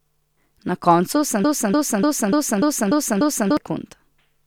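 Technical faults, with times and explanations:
1.44–3.57 s: broken-record loop after "koncu sem". A 0.29 s fragment repeats seven times, likely from a stalled stream resending its last chunk, so the real speech is lost.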